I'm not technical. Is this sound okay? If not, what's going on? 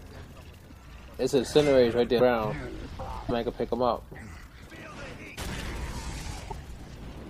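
No. At 2.18 s and 3.28 s the sound jumps ahead with a quick 30 ms glitch, likely a broken MP3 bit reservoir from dropped chunks.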